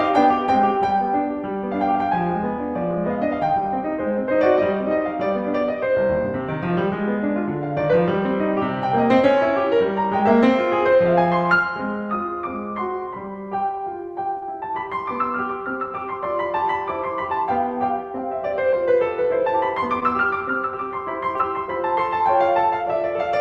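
Short concealed packet loss occurs at 14.37 to 14.44 s, 20.00 to 20.03 s and 21.37 to 21.42 s, where about 40, 20 and 20 ms of the music arrived too late and the decoder bridged each gap by extending the preceding sound before blending back, heard as brief smears or wobbles, with the Opus call path's 12 kHz top end throughout.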